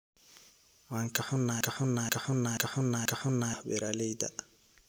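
At 1.61 s the speech locks into a broken-record loop: a chunk of just under half a second, about 0.48 s, plays four times back to back, exactly the same each pass, until it lets go at 3.54 s. That's close to two seconds where whatever should have come next is simply gone. It most likely comes from the player or stream stalling and replaying the last fragment it had buffered.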